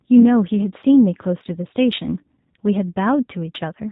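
Throughout, G.729 codec coding, which fits an 8 kbit/s stream, gives speech a rough, synthetic edge. The spectrogram shows nothing above 4 kHz and smeared, pulse-built harmonics.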